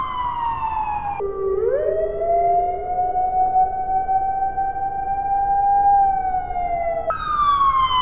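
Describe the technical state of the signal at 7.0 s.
At 7.0 s we're still inside a wrong sample rate stretch running from about 1.20 to 7.10 s. Everything plays at half speed and a full octave (12 semitones) down, which fits 16 kHz material being read out at 8 kHz with no conversion, so the sound comes out low and sluggish.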